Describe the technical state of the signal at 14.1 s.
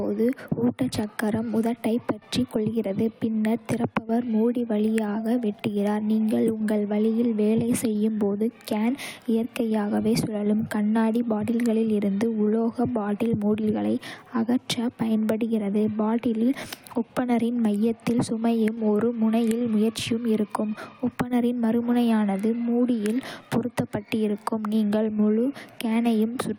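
At 14.1 s the signal is intact, with no fault audible at that point in the speech.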